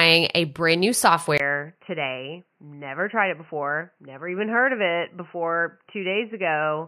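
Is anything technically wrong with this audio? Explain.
Yes. An input switched to a poorer device, likely, at 1.38 s after "a brand new": a 20 ms gap, then sound capped at 3 kHz, dull, slightly quieter, with faint new background noise.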